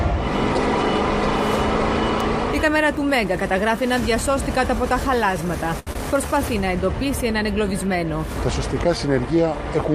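At 2.20 s there is a bit error spike. One flipped bit throws a single sample far off, heard as one sharp, broadband tick.

From 5.79 to 5.88 s comes a short stall from a late packet. The last sound is held for 73 ms while waiting, then resumes without loss.

At 5.93 s a short concealed packet loss follows. 60 ms never arrived. About 20 ms of extrapolated filler briefly smears the sound, and the delay drops by roughly 40 ms.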